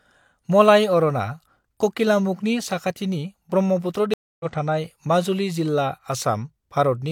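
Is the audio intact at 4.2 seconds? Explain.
No, a stream reconnect spans 4.14 to 4.46 s. The connection dropped, leaving about 260 ms of silence, then a fresh decoder resumed the speech about 0.2 s further on, skipping material. The waveform shows a flat gap; the spectrogram, a blank vertical band.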